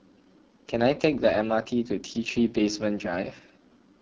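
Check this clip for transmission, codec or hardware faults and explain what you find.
One codec fault runs through the whole clip. The speech has been through AMR wideband (HD Voice) coding. The heavy roughness fits its lowest rate, around 6.6 kbit/s. The codec models speech up to 6.4 kHz with a pulse-driven vocal tract filter. Too few bits reach that model, so voiced sounds turn raspy and coarse. Above 6.4 kHz the top band is filled with shaped noise.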